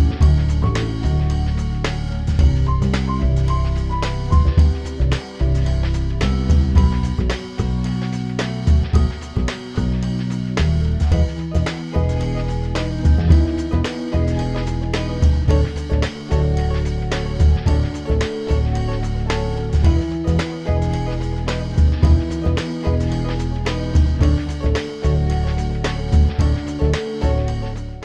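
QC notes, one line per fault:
No faults heard; nothing to log.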